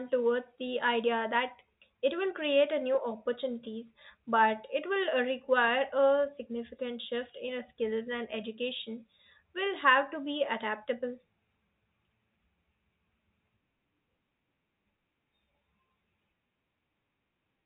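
Nothing stood out on listening to this speech recording, which carries the narrow band of ordinary telephone coding with nothing audible above about 3.8 kHz.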